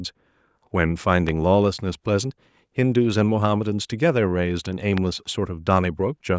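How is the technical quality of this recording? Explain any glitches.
Two loud pops interrupt the speech, at 1.29 s and 4.98 s. Each is a single sharp transient standing about 10 dB and about 15 dB above the speech respectively, while the speech continues underneath. The likely cause is an electrical step or pulse, from a plug, switch, static discharge or driver glitch, shaped by the downstream circuitry into a brief click. The call microphone processing, which limits content to 8 kHz and below, is working normally.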